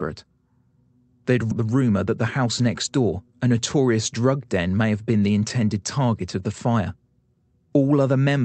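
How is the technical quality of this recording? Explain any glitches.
Two glitches stand out early in this speech recording, carried over an Opus-coded path whose sound stops at about 8 kHz.

At 1.51 to 1.53 s there is a skip ahead. Roughly 0.4 s of audio was dropped while later audio was already waiting, so playback jumps forward with no filler. The speech on either side is spliced almost directly, and that stretch is simply missing.

From 1.61 to 3.27 s comes a jitter buffer speed-up. With too much audio still queued, the receiver repeatedly trimmed short pitch-period pieces, removing around a fifth of a second in total. The speech runs at about 110% speed at unchanged pitch and sounds hurried.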